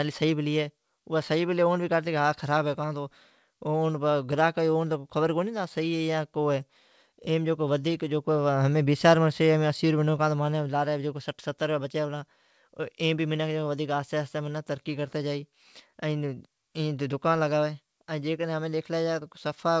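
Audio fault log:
Throughout: clock drift between sender and receiver. The sender's clock runs about 1.5 percent slower than the receiver's. The jitter buffer keeps draining, so the receiver must stretch the sound to stay fed. Small timing hiccups recur at uneven intervals.
0.27 to 19.48 s: repeated timing corrections. The receiver repeats short pieces again and again, all lengthening the sound. Playback runs at 99 percent speed, adding roughly 0.3 s overall. The edits are heard, if at all, as slight stumbles and an unsteady tempo, over a band that stops at 8 kHz, as expected of the G.722 call codec.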